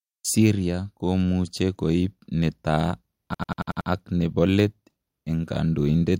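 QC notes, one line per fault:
3.34–3.90 s, system hang loop: right after "komuche koip netaa", one 93 ms slice of audio repeats exactly six times as a machine-gun stutter at 10.8 Hz before "ak nepo let en" resumes with practically nothing missing. The output kept cycling one ring buffer while the system froze, and the length fits a 4096-sample buffer. The waveform shows an identical block copied end to end, and the spectrogram shows the same pattern tiled at regular 93 ms intervals.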